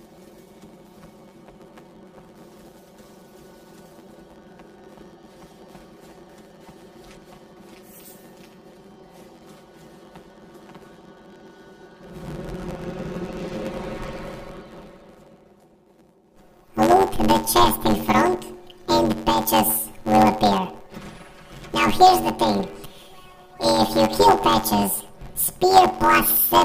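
From start to finish, planar audio read as interleaved: 10.88 ms channel blocks get read as alternating pairs, giving a robotic buzz at 91.9 Hz.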